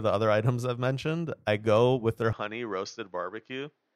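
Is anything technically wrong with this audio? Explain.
Yes. An input switched to a poorer device from 2.33 s, right after "I go with their", to the end at 3.96 s. The recording likely changed to another microphone, with nothing above 6.7 kHz. The speech turns duller, drops about 5 dB, and gains faint new background noise, with no silence at the switch.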